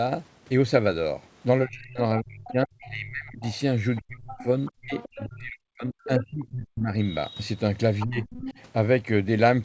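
From 1.65 to 3.44 s the talker's speech dips and breaks into pieces, losing about 1.5 s in total and falling as much as about 30 dB at its deepest. This is speech suppressed in double talk: with both sides talking at once, the echo canceller likely could not separate the talker from the loudspeaker echo, so it pulled everything down.

From 2.47 to 2.88 s a second voice sits about 20 dB under the speech. This is the other side's voice leaking through, likely residual loudspeaker echo that the canceller left in the microphone signal. It returns from 3.42 to 5.28 s at about the same level, likely the same leak.

From 3.99 to 6.94 s the talker's speech is suppressed in double talk again and more severely. About 2 s are lost, with drops of up to about 40 dB, likely because the canceller again treated the overlap as echo.

Within that stretch, from 6.02 to 6.45 s, the other side's voice leaks through more strongly, only about 15 dB below the speech, likely from incomplete echo removal. 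The same leak returns from 7.99 to 8.54 s at about 15 dB down.

Inside that leak, from 8.04 to 8.27 s, the talker's speech briefly drops by about 20 dB. This is a short bout of double-talk suppression, likely caused by the same overlap.

Throughout the clip, nothing above 8 kHz comes through, which fits the wideband call path.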